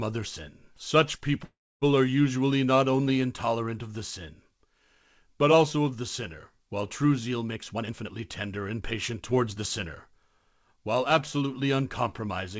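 A call audio freeze runs from 1.44 to 1.84 s, just before "are usually not only". The speech stops and the last sound is carried on briefly before about 0.29 s of silence, filling roughly 0.38 s in all. The likely cause is packets held up in transit, so the jitter buffer ran dry. When audio resumes it picks up exactly where it halted, so nothing is lost, but everything afterwards arrives about 0.38 s later.

A jitter buffer speed-up follows from 7.55 to 10.48 s, starting after "sinner while true zeal". The receiver had built up more delay than it wanted and trimmed it by cutting out many short pitch-period-length slices in quick succession, removing around 0.4 s in total. The speech plays at about 112% of its normal rate with the pitch unchanged, so the delivery sounds rushed. Throughout, the G.722 call codec at 64 kbps leaves nothing above 8 kHz.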